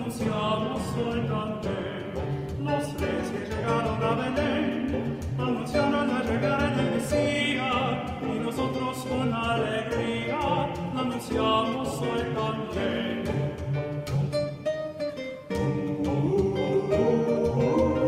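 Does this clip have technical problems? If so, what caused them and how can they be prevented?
Yes. For the first 6 seconds the audio sounds dull, with the treble missing or synthetic and coding artefacts stronger. At 6.0 s the quality jumps up abruptly, without any gap. This is an adaptive stream starting at a low bitrate: the player began on a lean version to start fast, which fits roughly 32 kbit/s Opus, then switched to a richer one, around 64 kbit/s, once it had measured the connection. To prevent it, start playback on a higher-bitrate version when bandwidth is already known.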